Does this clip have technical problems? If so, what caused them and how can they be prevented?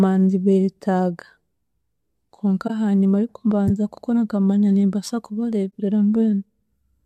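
Yes. A corrupt frame concealed: flipped bits in an AAC frame were detected by the decoder, which masked the frame itself. The frame is covered in the speech from 2.67 to 2.70 s, about 32 ms long, which fits one lost frame. Error-correcting transport or retransmission prevents this.

A corrupt frame decoded: the decoder played a damaged frame as if it were valid, so misread gains and codes put energy at the wrong frequencies. This gives a loud burst of misplaced energy from 3.67 to 3.70 s, about 26 ms long and peaking around -5 dBFS. Checksums that reject bad frames before decoding prevent this.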